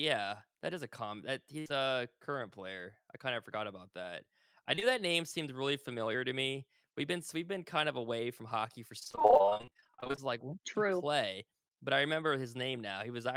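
At 1.59 s, a burst of packet loss removes about 60 ms of speech. The receiver stretches the last sound to cover it, so a brief held buzz or fading hiss replaces the missing audio.

Short concealed packet loss follows straight after, from 1.68 to 1.72 s. A further 20 ms is patched, leaving a quick smear as the real signal returns. Two more short concealed losses sit back to back from 4.76 to 4.83 s, between "forgot about that I" and "that name seemed really". Each patch lasts 20 ms or less and sounds like a small wobble.

From 8.99 to 10.19 s, just after "away from hockey for", comes repeated packet loss with a robotic sound. Dozens of short gaps, none longer than about 40 ms, are each filled by continuing the last sound. About half the stretch is patched audio, so the speech turns choppy, with fragments missing.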